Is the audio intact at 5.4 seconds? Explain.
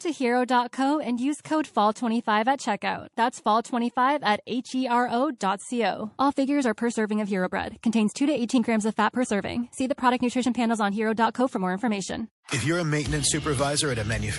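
No. From 5.38 to 5.41 s there is pre-echo: the quantisation noise from a roughly 48 ms block smears about 30 ms ahead of the attack, rising by about 21 dB. It sounds like a brief hiss before a softened hit, and a spectrogram shows a broadband smudge before the transient's edge. Underneath, the sound is watery and dull from MP3 compression, likely at a low bitrate near 48 kbps, with the treble cut flat and flickering gaps visible in the spectrogram.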